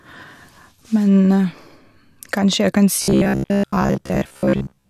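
From 3.02 s to 4.89 s the speech turns into robotic sound from repeated short buffers: a rigid, metallic buzz fixed at 66.8 Hz that still loosely tracks the words. The likely cause is new audio arriving too seldom, so roughly 15 ms fragments are looped to fill the gaps and most of the real signal is skipped. Unlike dropouts or stutter, there is no silence or audible jump, only that steady imposed pitch.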